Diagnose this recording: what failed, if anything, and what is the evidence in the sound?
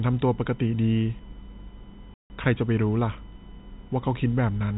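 USB whine runs throughout, a steady tone on a 1 kHz fundamental with its strongest component at 6 kHz, about 35 dB below the speech. The bus's 1 ms frame timing is leaking into the analogue wiring through the power or ground rather than arriving as a digital fault.

Packet loss filled with silence at 2.14 to 2.30 s: the speech drops out for 160 ms with hard edges. That gap fits eight 20 ms packets lost on the network, and the receiver played pure silence in their place rather than concealing the loss.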